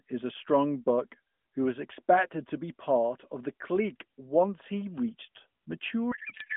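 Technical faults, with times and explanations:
6.12 to 6.57 s, codec payload misread: in the closing half second the speech turns into garbled noise and warble that barely tracks it. The AMR frames were packed octet-aligned but read as bandwidth-efficient, so every field after the header lands a few bits out of place and the decoder builds nonsense parameters from valid-looking frames. Unlike packet loss or concealment, nothing goes silent or repeats. The frames keep arriving on time and just decode wrongly, through the narrowband, lightly coded 12.2 kbps line.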